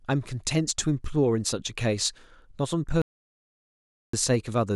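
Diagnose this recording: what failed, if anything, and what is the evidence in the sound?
An audio dropout to silence runs from 3.02 s to 4.13 s, cutting the speech mid-flow for about 1.12 s. The gap is silent with no room tone, which separates it from a level dip or gate; a lost input device or link upstream of the recorder is the likely cause.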